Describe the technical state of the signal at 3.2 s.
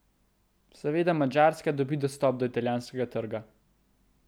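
At 3.2 s the speech signal is intact, with no dropout, distortion or other fault audible at that moment.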